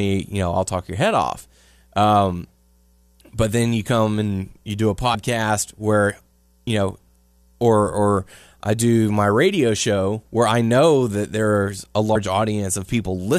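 Speech with compressed frames skipped at 5.13 s after "and you do a" and at 12.15 s after "know that there's a". About two and then four 23.2 ms frames drop out, which cuts roughly 50 ms and 100 ms of audio so the speech jumps ahead at each join.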